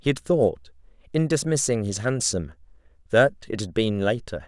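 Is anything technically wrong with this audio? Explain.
No, nothing in this speech recording stands out as a technical fault.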